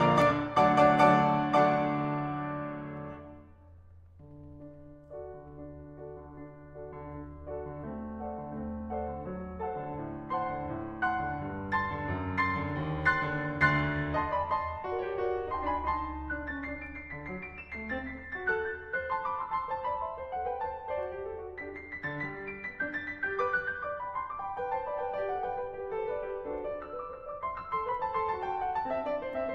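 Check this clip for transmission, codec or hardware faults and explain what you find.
Two codec-side faults turn up in this music clip, both the same kind.

Compressed frames skipped, at 0.30 s and 27.91 s: the decoder lost a single compressed frame each time, so the music leaps forward by roughly 20 ms.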